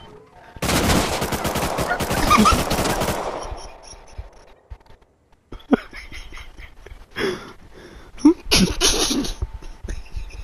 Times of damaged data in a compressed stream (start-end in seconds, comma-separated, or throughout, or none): none